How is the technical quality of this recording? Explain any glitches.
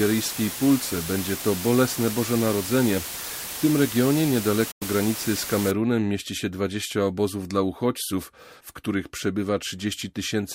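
The recording has two clear technical faults, both in roughly its first 5.7 s.

From 0.0 to 5.71 s the speech sits under a constant, even hiss, roughly 10 dB below the signal, with no harshness or distortion. This is low bit depth with dither. The audio was reduced to very few bits, consistent with about 5, and dither added before rounding turned the quantisation error into steady white noise.

At 4.71 s the sound fades out over about 8 ms and stays silent for roughly 0.1 s before returning at 4.82 s. This is a digital broadcast dropout. The receiver muted after losing the signal, consistent with three failed frames, and about 96 ms of speech is lost.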